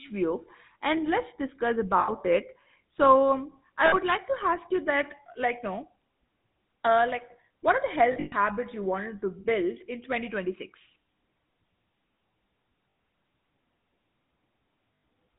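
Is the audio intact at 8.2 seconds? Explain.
No. At 8.2 s the audio falls inside a burst of lost GSM frames running from 8.12 to 8.33 s. Bad frames are scattered over those 0.2 s, covering about 160 ms of it, with the longest unbroken gap roughly a tenth of a second. Each missing frame is rebuilt by repeating the last good frame's vocal-tract and excitation settings, so the speech freezes into a rough, metallic ring instead of continuing. On a spectrogram this shows as frozen, horizontally smeared bands. In the waveform, a near-identical cycle repeats until good frames return.

The moment also carries the GSM full-rate codec, which is present throughout and plainly audible, consistent with the 13 kbps full-rate coder. It rebuilds the voice from a vocal-tract model driven by regularly spaced pulses and keeps only every third excitation sample. That gives the speech a buzzy, gravelly roughness. 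A spectrogram shows a hard ceiling at 4 kHz with nothing above it.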